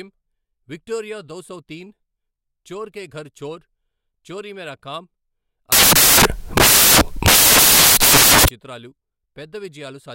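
From 5.72 s to 8.48 s the speech gives way to loud, broadband hiss: samples built from the wrong bytes. For this stretch the reader assembles each sample with its bytes misaligned or in swapped order, so the rapidly varying low-order bits land in the most significant position. The result behaves like harsh noise, close to white on the louder speech, before clean decoding resumes at 8.48 s.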